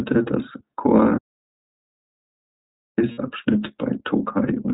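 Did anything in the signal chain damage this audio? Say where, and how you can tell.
Yes. At the codec stage, the whole clip passed through the iLBC codec, which fits its 13.33 kbps, 30 ms frame mode: the speech is band-limited to 4 kHz and sounds plainly rough and synthetic.

From 1.18 to 2.98 s the audio drops out to silence, with no room tone, for about 1.8 s. This likely means the input or link was lost while silence kept being written.

On the network, lost iLBC frames at 3.11 to 3.19 s leave 60 ms of concealment, consistent with two 30 ms frames. It sounds like a briefly held, buzzy vowel before the speech snaps back.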